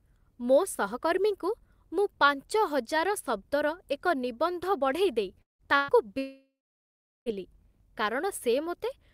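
At 5.41 s the speech breaks off for about 0.2 s, which is likely a long network dropout. Roughly 180 ms of audio never arrives. The last sound is stretched into a brief fading tail, and about 150 ms of dead silence follows. On a waveform this shows as a short decaying smear and then a flat line. A spectrogram shows a blank vertical gap before speech resumes at 5.62 s, with the lost material simply absent.

From 5.77 to 5.91 s comes a burst of packet loss, about 120 ms of audio gone. Here there is no silence: the receiver holds the last sound as a buzz or hiss that fades over the gap. A spectrogram shows frozen, repeated spectral bands dimming toward the right edge. The waveform shows a repetitive, shrinking pattern instead of natural variation, and speech then continues with the intervening audio missing.

What is likely the same dropout fault returns at 6.18 s and lasts until 7.29 s, with about 1.08 s of audio lost. 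The held tail fades within a few tenths of a second, and roughly 750 ms of silence remains. On the waveform this appears as a long flat stretch. The spectrogram is empty until the speech reappears further on.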